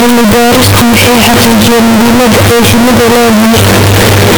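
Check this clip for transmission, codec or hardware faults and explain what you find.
One fault runs through the whole recording: float read as integer. From start to finish the speech is very loud and harsh. The waveform sits at an almost fixed, high level as an almost square shape. Background noise comes through as loud as the speech, though the pitch can still be followed. The cause is likely 32-bit floating-point samples being decoded as 32-bit integers. The sign and exponent bits then set each value, so the original level is lost.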